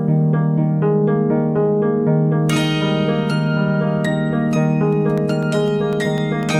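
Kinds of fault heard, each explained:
Periodic USB or driver dropouts: something on the USB bus or in the driver stalls the audio at a fixed interval, removing a fraction of a millisecond each time and leaving silence. From 4.93 s to 6.43 s this gives about seven evenly spaced ticks, 0.25 s apart.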